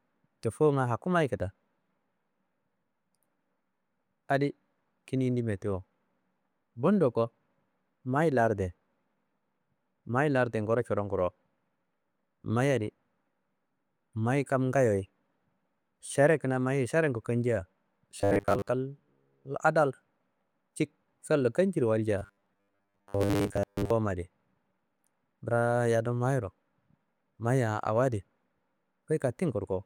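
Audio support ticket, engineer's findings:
Robotic sound from repeated short buffers, 18.19–18.69 s and 22.18–23.91 s: likely starved input looping a 10 ms chunk, forcing a rigid 100 Hz metallic buzz.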